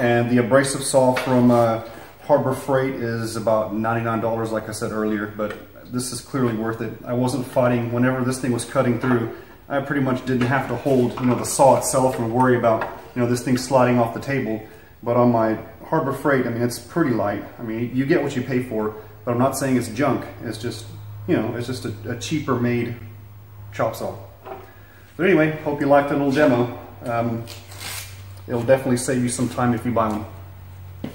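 At 22.99 s, a block of digital silence, 14 ms where the audio drops out with no fade, gives a tick or dip rather than an audible stretch of silence.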